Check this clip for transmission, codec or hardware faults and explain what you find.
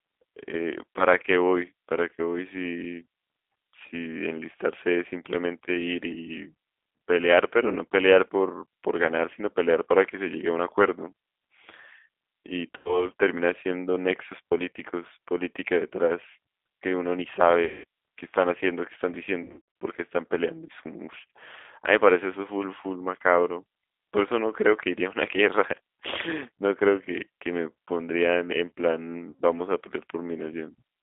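Two faults are audible: G.729 codec coloring throughout, and four bursts of concealed packet loss.

G.729 codec, across the whole clip: the speech is rebuilt from a vocal-tract filter, a pitch predictor and a few pulses per frame, leaving it plainly rough and synthetic. The band runs only from 250 Hz to 3.6 kHz, which fits an 8 kbit/s G.729A stream.

VoIP packet loss concealed by the speech codec, at 12.77–13.09 s, 17.64–17.84 s, 19.44–19.61 s and 29.31–29.40 s: the decoder extrapolates its last pitch and filter with falling gain, smearing the speech into a fading buzzy tone or coloured noise. The third gap sounds broken into several short dropouts rather than one, and each gap's lingering weakness points to missing stretches of roughly 80 to 240 ms.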